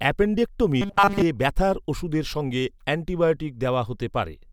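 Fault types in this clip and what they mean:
Robotic sound from repeated short buffers: From 0.82 to 1.23 s, just before "ব্যথার ওষুধের সঙ্গে অ্যান্টিবায়োটিক", the speech becomes a rigid metallic buzz at 200 Hz. Most of that stretch is repeated material. Late audio was likely patched by looping a 5 ms buffer.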